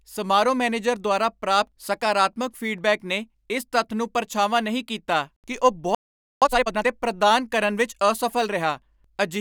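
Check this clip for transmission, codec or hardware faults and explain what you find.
Two related faults sit close together in the second half of this speech clip: a playback stall followed at once by a time-compressed catch-up.

At 5.95 s, just after "ਨਹੀਂ ਕੀਤਾ ਕਿ ਉਹ", the speech cuts out mid-flow and the output falls silent for about 0.47 s, until 6.42 s. This is a playback stall: the output simply stopped being fed. The likely cause is that the player's buffer ran dry or its audio thread was held up, so nothing reached the output until it recovered.

From 6.42 s to 6.88 s the speech resumes hurried, running at about twice normal speed while keeping its normal pitch, before settling back to normal pace at "ਪ੍ਰਦਾਨ ਕਰਨ ਵਿੱਚ". This is time-compressed catch-up: to work off the backlog built up during the stall, the player trims out short slices of audio and cross-fades the joins. That shortens playback without shifting pitch.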